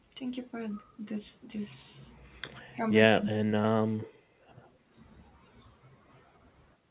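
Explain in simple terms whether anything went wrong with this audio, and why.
Speech suppressed in double talk, at 2.68 to 2.79 s (a dip) and 3.2 to 3.63 s (a deep cut): likely both sides talking at once, so the echo canceller turned this voice down too.

Echo leak, at 4.59 to 4.68 s: a very faint copy of the voice returns about 142 ms late, likely loudspeaker sound the echo canceller failed to remove.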